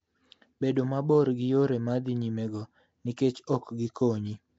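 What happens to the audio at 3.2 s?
At 3.17 s, just after "yore ma dhi nyimego", a brief pre-echo occurs. A sharp attack lands late in a transform block, and the quantisation noise sized for that loud onset is spread back across the quiet instant before it. The result is a short hiss smeared about 10 ms ahead of the attack, which blunts the onset so it arrives soft rather than crisp.

That moment also carries the rough, hissy halo and underwater smear heard across the whole clip, which is likely Nellymoser compression. The degradation is plainly audible, with nothing present above 7.8 kHz, and it fits a low-rate setting around 32 kbps. The codec assigns a fixed, small bit budget to each block, so weak bands receive no bits and are filled with synthetic noise, which produces the grainy, washed texture around the speech.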